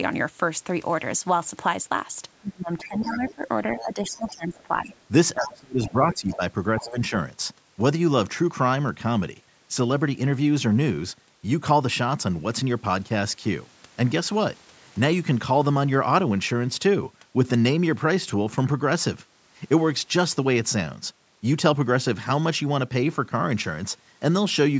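A speech recording, band-limited to nothing above 8 kHz as expected from call microphone processing, shows speech suppressed in double talk between 2.4 and 7.12 s. The talker's level drops in pieces by up to about 20 dB, for roughly three seconds in total across that window. The pattern points to an echo canceller that likely could not tell the near talker from loudspeaker echo while both sides spoke, and so attenuated everything at once. Overlapping that stretch, the other side's voice leaks through from 2.83 to 4.3 s and again from 5.41 to 6.91 s, sitting about 15 dB below the main speech. This is the far-end signal played on the talker's loudspeaker and picked up by the microphone, with the echo canceller likely failing to subtract it fully. The residue therefore falls within the same window where the suppression is pulling the talker down.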